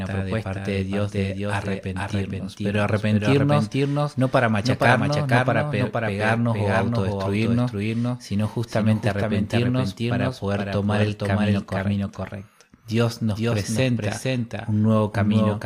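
A doubled audio track runs throughout this speech clip. A second full-band copy of the recording trails the original by about half a second and sits a few decibels below it. It has no reverberant tail or room colouring, so it sounds like a clean, late duplicate rather than an echo from a space. The likely cause is the same signal being captured again through a slower path, or an edit leaving two copies out of step.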